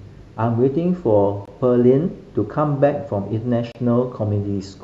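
At 1.45 s the speech drops out for about 22 ms, and at 3.72 s for about 30 ms. Each is a gap at a join of encoded pieces. Untrimmed encoder delay and end padding leave silence there. The codec smears the edges, so the silent part is shorter. Speech then carries on from where it stopped.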